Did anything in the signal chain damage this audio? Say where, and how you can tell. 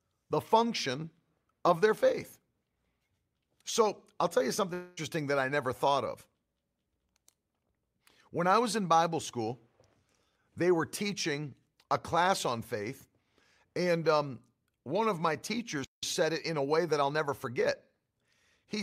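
Yes. A long network dropout runs from 4.73 to 4.99 s. The speech does not break into silence. The last sound is stretched into a buzzy tail that fades over about 235 ms, and the speech resumes about 240 ms further on, with that stretch of the speech gone. This is a network-stage fault: the packets for that span most likely never arrived, and the receiver's concealment filled the gap by extending what it last had.

A playback stall follows from 15.84 to 16.03 s. The speech halts mid-flow for about 181 ms of silence and then continues. Because the gap is a clean pause rather than a concealed tail with material lost, the likely cause is the player's buffer running dry or its output thread being briefly blocked, not the network.

Time-compressed catch-up runs from 16.03 to 17.83 s, straight after the stall. The speech comes out hurried, at about 1.1 times normal rate, but its pitch stays where it was. 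This is the playback stage clearing the backlog that built up during the stall. It cuts short slices out of the audio and cross-fades the joins, which shortens the time without transposing the pitch.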